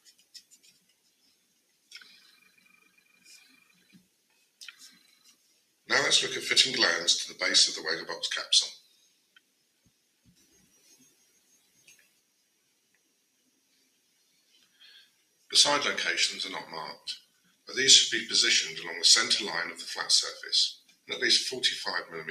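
A speech-tuned noise suppressor stays active across the whole clip, treating sustained tones, ambience and decays as noise. Its gain swings by around 20 dB, so attacks pass while held sound sinks, giving a pumping, fluttering, thinned-out character.

Sound is cut by the noise suppressor at 0.0–1.91 s, 2.54–3.11 s, 3.69–4.6 s, 5.14–5.87 s, 8.88–15.49 s, 17.26–17.67 s and 20.83–21.07 s. Steady or fading material drops by about 6 to 9 dB, and its tails end abruptly.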